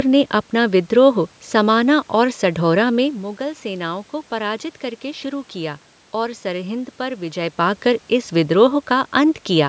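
Nothing stood out on listening to this speech clip.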